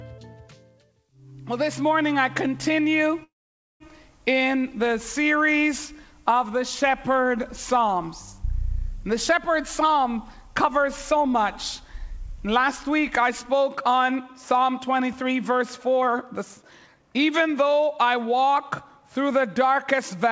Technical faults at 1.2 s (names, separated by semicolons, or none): none